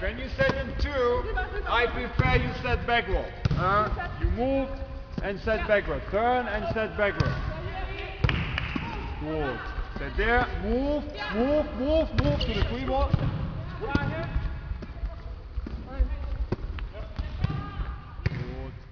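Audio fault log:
Throughout: aliasing. Gritty, metallic tones at unrelated pitches sit roughly 30 dB under the sound, and the spectrum runs hard up to 5.5 kHz. The rate was lowered without filtering first, which fits a drop to 11 kHz, so content above 5.5 kHz folded back down.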